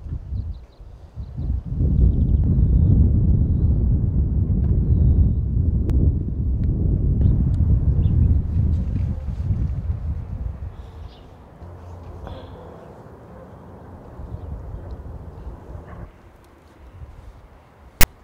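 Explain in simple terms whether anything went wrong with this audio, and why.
At 18.01 to 18.04 s, file tags played as audio: stored text is read as sound, giving a harsh, lopsided rasp followed by silence.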